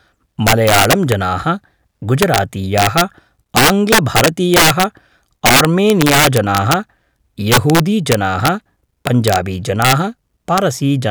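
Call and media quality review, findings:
Integer overflow throughout, speech: violent cracks on loud syllables, harsher than clipping. Gain stage about 8 dB over full scale; roughly one to two percent of samples wrap to opposite sign. Waveform: peaks flip rail-to-rail. Spectrogram: full-band vertical streaks.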